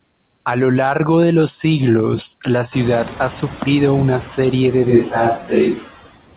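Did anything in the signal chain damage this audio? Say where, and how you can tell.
Yes. Noise suppressor artifacts run through the whole clip: call processing pulls steady noise down by about 21 dB frame by frame, so the residue dips between syllables and swells under them, within a band that stops at 4 kHz.

Noise suppressor catching up, 2.71 to 3.07 s, right after "de los siglos la": the room noise jumps shortly before, and the suppressor's noise estimate lags. For about 360 ms the noise passes with only about 5 dB of reduction, then sinks as the estimate adapts, before "ha sufrido una serie".

Switch to a distant microphone from 4.90 s to the end, just after "sufrido una serie de": at the capture stage the voice abruptly turns roomy and hollow with less bass, though with little change in level, and faint room noise beneath it. The likely cause is the close microphone's signal dropping out in favour of a farther one.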